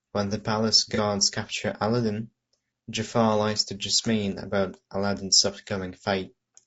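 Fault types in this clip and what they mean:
Low-delay AAC compression: throughout, the speech sounds plainly rough and grainy, with noise between harmonics, most likely from a low-delay AAC codec at a low bitrate, around 32 kbps.
AAC frame loss with concealment: at 0.95 to 1.00 s, just after "the palace", a brief smeared, noisy patch of about 30 ms, fitting one lost frame filled from the previous spectrum.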